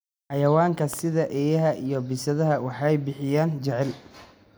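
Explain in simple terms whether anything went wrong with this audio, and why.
A loud pop, two sharp clicks between 0.93 and 1.01 s, sits on top of the speech, which carries on underneath, likely from a sudden electrical jolt such as a plug or switch.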